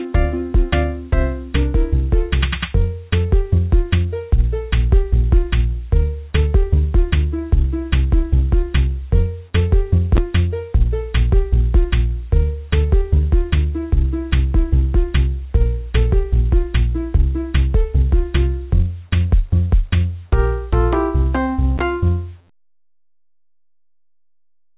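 No technical faults can be heard; the sound comes over an ordinary call path whose narrowband coding leaves nothing above 4 kHz, which fits the G.711 A-law codec at 64 kbps.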